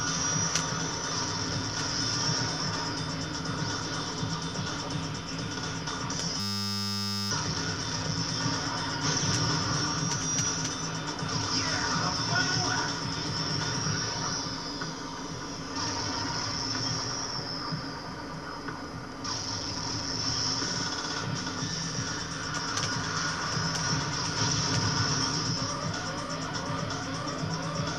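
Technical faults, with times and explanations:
6.40–7.31 s, system hang loop: the computer or its audio driver stalled while the sound hardware kept replaying the same small ring buffer, so one 10 ms slice repeats exactly, 91 times, which fits a buffer of about 10 ms. Because the slice is so short, the repetition fuses into a steady buzz at 100 Hz rather than a stutter, and about a second of real audio is lost before playback resumes.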